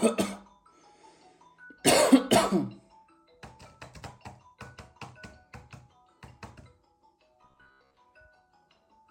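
A recording of everyday sounds whose audio turns into a rigid, metallic buzz at 66.8 Hz from 7.42 to 7.97 s, the robotic sound from repeated short buffers. About half of that stretch seems to be copies of a segment roughly 15 ms long, likely because audio arrived too late and the last short block was replayed to fill the gaps. A waveform would show identical chunks repeating, and a spectrogram evenly spaced horizontal harmonic stripes 66.8 Hz apart.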